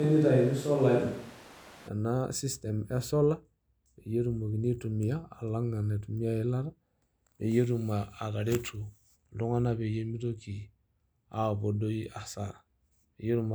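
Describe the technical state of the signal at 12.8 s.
At 12.8 s the signal is intact, with no audible fault at that moment.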